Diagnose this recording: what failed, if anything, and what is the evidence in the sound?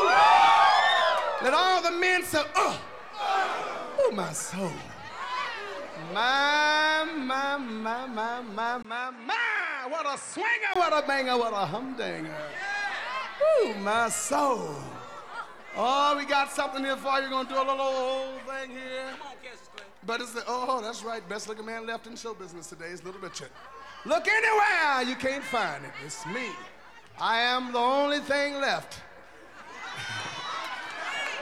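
Driver stage. From 8.83 to 10.76 s, after a 20 ms gap, nothing above 10 kHz, slightly quieter, faint new hiss. Likely an input switched to a poorer device.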